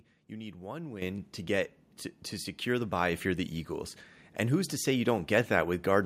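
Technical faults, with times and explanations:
1.02 s and 3.12 s, microphone volume stepped up: The level jumps about 10 dB between "you need one" and "to get to to", then about 2 dB more between "to secure the bye" and "you're the". The input volume was raised in a single step each time, so the voice and the background noise rise together and stay up. A talker moving closer would instead mostly raise the voice, and a smoothly acting gain control would give a gradual change.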